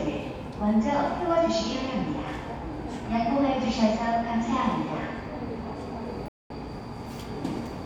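At 6.28 s the sound cuts out. Silence lasts about 218 ms, until 6.50 s. Then it returns further along, as if it had kept playing. This is likely a Bluetooth dropout. Packets arrived too late for the headphones and were discarded.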